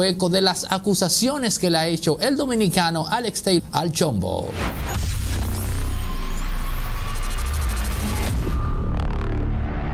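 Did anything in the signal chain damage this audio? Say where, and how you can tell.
Yes. A skip ahead at about 3.59 to 3.67 s, in the network path or the jitter buffer, drops roughly 0.4 s of audio. The two sides join almost seamlessly, with little or no gap. That sets it apart from a dropout, which leaves an audible gap.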